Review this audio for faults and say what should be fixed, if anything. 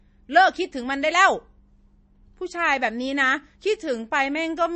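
Throughout the speech, nothing survives above 8.3 kHz, and the sound is plainly watery and swirly, with chirpy, metallic s sounds and smeared consonant attacks. This is likely MP3 compression at a starved bitrate, which fits around 32 kbps: the encoder cuts the treble and drops weak frequency lines that flicker between frames. A simple low-pass filter would remove the top without that swirling. Encode at a higher bitrate, or keep an uncompressed master.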